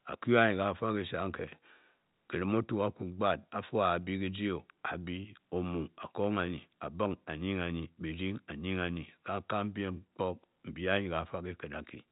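No technical faults can be heard in this speech.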